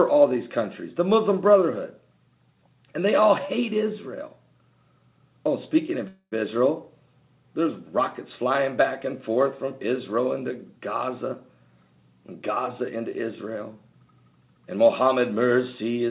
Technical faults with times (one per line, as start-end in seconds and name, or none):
6.08-6.37 call audio freeze